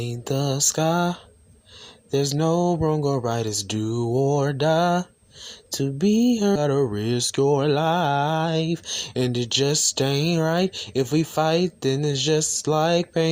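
At 6.55 to 6.57 s a skip ahead occurs: roughly 0.4 s of audio was dropped, so the sound jumps forward with no gap and the two sides are spliced almost directly. Next comes jitter buffer speed-up, as the overfilled buffer was drained by snipping out short pitch-period pieces. From 6.65 to 7.54 s playback runs at 107 percent, losing around 70 ms, and from 8.48 to 9.93 s at 110 percent, losing around 150 ms. Both stretches sound hurried while the pitch holds steady.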